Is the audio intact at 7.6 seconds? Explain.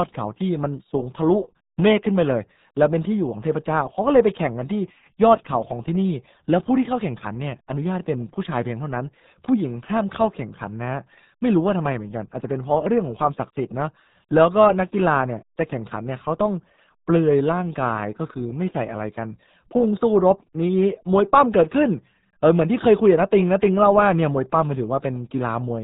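No, the RealAudio 14.4 codec affects the whole clip: its 8 kbit/s coding removes everything above 3.8 kHz, leaving muffled, gargly speech and a spectrogram with a flat, empty band above that line.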